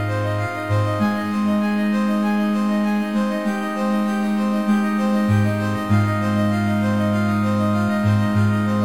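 Nothing technical to flag in this bit of music: there's no fault to point to anywhere in the clip.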